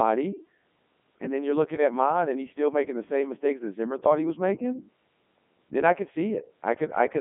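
Speech runs throughout through the Codec 2 vocoder, heard as robotic, buzzy synthesis with nothing above 3.7 kHz, which fits its 3.2 kbit/s mode. Unlike plain telephone band-limiting, the waveform itself is rebuilt from sine waves, so texture, not just bandwidth, is lost.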